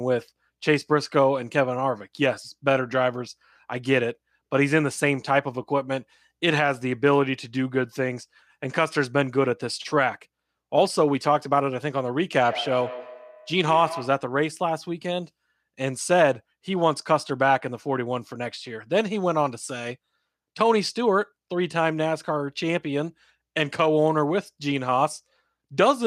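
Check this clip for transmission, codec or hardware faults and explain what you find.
One fault is present: a feedback echo between two devices, from 12.41 to 14.29 s. Two devices on the same call share a room, so one plays back what the other's microphone sent and that microphone picks it up again. Each device's echo canceller removes only its own playback, so this loop goes unchecked. The speech comes back at a fixed interval of roughly 150 ms, with the strongest repeat about 12 dB below the speech.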